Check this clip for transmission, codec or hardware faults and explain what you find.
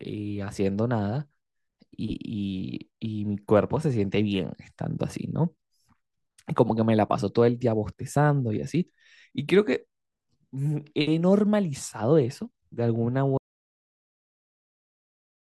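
One fault is present: an audio dropout to silence from 13.38 s until the end. The speech cuts off abruptly into digital silence with no room tone, likely because the input device or link was lost while recording kept writing zeros. The waveform flattens to a dead line, and the spectrogram goes blank at every frequency.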